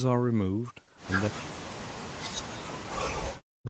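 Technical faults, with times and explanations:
1.28–3.69 s, speech suppressed in double talk: from 1.28 s to the end, the speech drops sharply, falling by about 40 dB at its deepest. Both sides were likely talking at once, so the echo canceller mistook this talker for loudspeaker echo and turned everything down.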